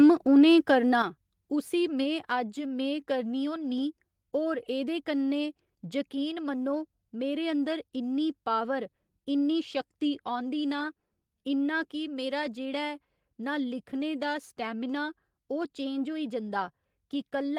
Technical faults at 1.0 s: microphone volume stepped down

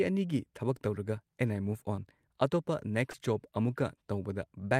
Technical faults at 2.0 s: short concealed packet loss

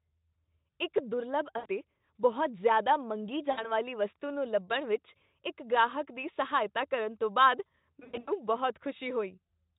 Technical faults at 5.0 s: none

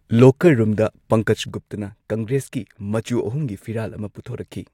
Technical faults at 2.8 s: sudden gain jump

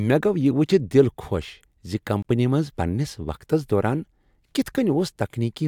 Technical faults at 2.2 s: block of digital silence

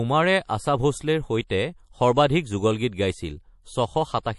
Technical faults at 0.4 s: MP3 compression

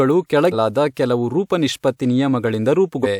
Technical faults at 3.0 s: compressed frames skipped

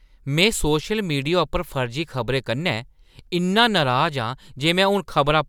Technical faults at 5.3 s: none

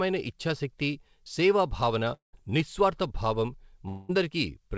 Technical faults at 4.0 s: long network dropout

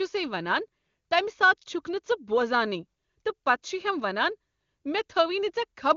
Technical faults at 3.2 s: none

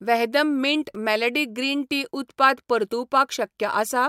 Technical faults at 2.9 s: none

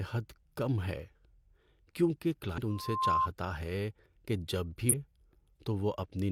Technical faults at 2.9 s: loudspeaker feedback squeal

